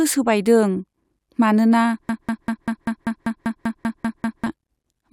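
A speech recording falls into a broken-record loop from 2.09 s to 4.46 s, where a 195 ms fragment repeats exactly, back to back, twelve times. The likely cause is a stalled player, encoder or stream that kept re-sending the last piece it held, so the speech due in that stretch never arrives. Unlike an echo or a reverb tail, each repeat is identical and undecayed, and unlike a stutter, it continues for over two seconds.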